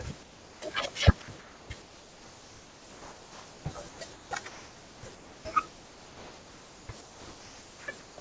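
From 0.23 to 0.62 s the speech drops out for about 390 ms and steady synthetic hiss takes its place. That's sound dropped by the voice detector: the sender likely judged the speech to be background, stopped transmitting, and the receiver filled in comfort noise.

From 1.22 s to 8.18 s it gets choppy. About 5.6 s of that stretch is replaced, with quiet syllables and word edges swapped for comfort noise, and the real room noise sits about 39 dB below the speech. This is sound chopped by the voice detector, likely from the sender's detector toggling transmission on and off repeatedly. Across the clip there's nothing above 8 kHz, which fits the G.722 wideband call path.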